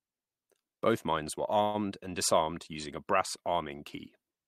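At 1.63 to 1.77 s, between "mines were" and "and disarmed using a", there is a call audio freeze. The last sound is stretched into a fading buzz or hiss for about 105 ms, likely from delayed packets emptying the jitter buffer. The speech then resumes intact, only later.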